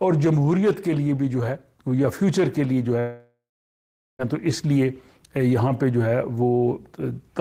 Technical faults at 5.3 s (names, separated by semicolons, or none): none